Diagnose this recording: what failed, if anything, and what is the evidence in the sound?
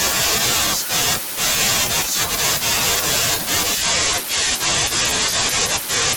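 A Bluetooth SBC bit pool drop at the codec stage affects this speech from 3.81 s to the end of the clip at 6.17 s. The treble dulls abruptly and a gritty, grainy noise sits on the speech and never recovers. The encoder has cut its bit allocation, which fits a bit pool falling from 31 to 12, around 88 kbps. The highest sub-bands are starved of bits and the remaining bands are quantised coarsely.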